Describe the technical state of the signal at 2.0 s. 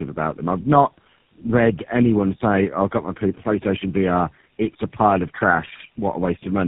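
At 2.0 s the speech sounds rough, muffled and warbly, with nothing above about 3.7 kHz. This is tandem speech coding, present throughout: the audio was decoded and re-encoded by three speech codecs in a row, which fits a GSM full rate to G.729A to GSM chain, each coder compounding the last one's damage.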